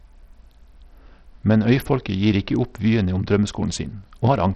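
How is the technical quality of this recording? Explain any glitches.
The recording is heavily degraded by codec damage for its entire length. Bluetooth SBC compression, throughout: a starved bit pool, which fits roughly 64 kbps, likely left the upper sub-bands with almost no bits and quantised the rest coarsely. Treble flickers and cuts off near 14.7 kHz, with gritty noise and aliasing riding on the speech.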